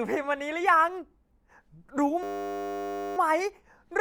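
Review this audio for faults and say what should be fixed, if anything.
A system hang loop runs from 2.23 to 3.17 s, where the speech is replaced by a steady buzz at 100 Hz. The driver or host stalled while the audio hardware kept replaying the same 10 ms stretch of its ring buffer, close to a hundred times over. The loop is that short, so it fuses into a tone rather than a stutter, and essentially no speech appears to be lost once playback resumes. To prevent it, the audio thread needs real-time priority and a watchdog that mutes the output when the buffer stops being refilled.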